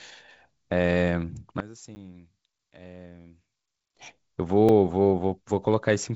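From 1.60 s to 3.97 s the speech drops by about 20 dB and turns faint when heard in mono. One channel is likely inverted, so the material common to both channels cancels and only their small difference remains. The top end still stops near 7.7 kHz, as expected from G.722 wideband telephone coding at 56 kbit/s. Within that stretch, at 1.95 s, a block of digital silence about 10 ms long cuts the sound out with no fade, heard as a tick or dip. At 4.69 s a second block of digital silence, about 3.3 ms long, is heard as a brief tick. Both are most plausibly output buffers that were not filled in time.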